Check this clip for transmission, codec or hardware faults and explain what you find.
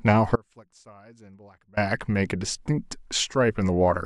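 One fault stands out: an audio dropout to a faint residue. From 0.36 s to 1.77 s, about 1.4 s of the speech is lost. The cut is abrupt at both ends, not a pause or a fade. The gap is not silent. A faint leak of the sound remains, roughly 30 dB below its normal level. The likely cause is the wanted signal being interrupted while the path after the break stayed live and passed only this low residue.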